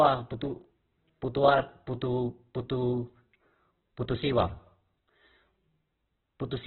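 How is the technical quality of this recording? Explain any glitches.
Pretty rough: the whole clip carries heavy codec damage. From start to finish the speech has nothing above 4.2 kHz, and what's left sounds grainy and harsh rather than swirly. That's likely Opus compression in its music mode, starved for bits and patching bands with noise and folded copies. The sound fits a very low bitrate, somewhere around 8 kbps.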